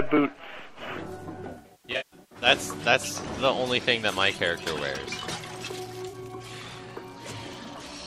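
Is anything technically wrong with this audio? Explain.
Yes, there's AAC frame loss with concealment. From 1.52 to 2.47 s, about 0.62 s of scattered gaps, the longest run near 150 ms, get patched from the last good spectrum and sound smeared and noisy. A brief 43 ms patch recurs at 6.09 s.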